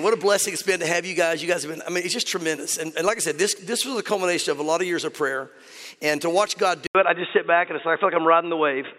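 At 6.87 s the recording likely switched its input to a poorer device, which held to the end. After a gap of 80 ms, everything above 3.8 kHz is gone, so the sound turns dull and boxy, with a small level shift and faint new background noise.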